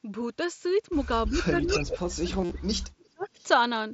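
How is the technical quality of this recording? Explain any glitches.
The recording has a few clear glitches, all from about 1.3 s onward.

Echo leak shows up three times: 1.27 to 1.47 s, 1.67 to 1.99 s, and 3.23 to 3.43 s. A delayed copy of the talker comes back about 340 to 350 ms late. The likely cause is a far-end loudspeaker setup whose echo canceller didn't fully remove what its mic picked up, so some of it got sent back. The middle one is the most obvious, only about 5 dB under the direct sound. The first sits roughly 25 dB down and the last about 35 dB down, so those two are faint scraps.

Speech suppressed in double talk runs from 1.29 to 3.39 s. It comes and goes for about a second and a half in total, and at its worst the level drops by around 40 dB. Both ends were likely talking at once, and the canceller, unable to tell the talker from the returning echo, turned everything down. 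You hear the talker dip sharply and cut out in pieces through that stretch.

Concealed Bluetooth headset packet loss hits from 2.42 to 2.51 s. Roughly 68 ms of audio went missing between headset and phone across around nine lost frames, spread over about 90 ms. The longest gap is about 53 ms. The receiver patched the holes by repeating the best-matching slice of recent waveform, so instead of silence you get a short buzzy, tonal blip at full level and a slight warble where real audio picks back up. Underneath all this, the mSBC headset link itself comes through with only light grain.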